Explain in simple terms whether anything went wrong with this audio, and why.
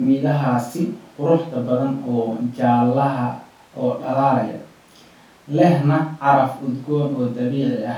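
Nothing went wrong with this audio; no technical faults can be heard anywhere in the recording.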